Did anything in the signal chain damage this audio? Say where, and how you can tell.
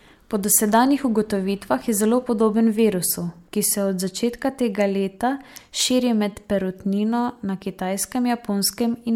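No, nothing in this signal chain damaged the audio.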